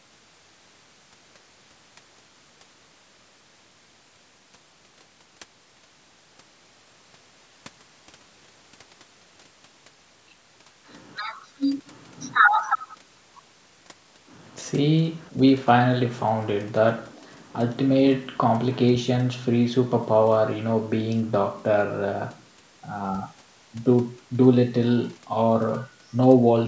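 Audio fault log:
No faults detected.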